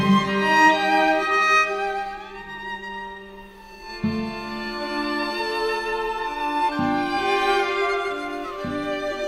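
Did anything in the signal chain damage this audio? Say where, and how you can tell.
No, nothing in the signal chain damaged this audio.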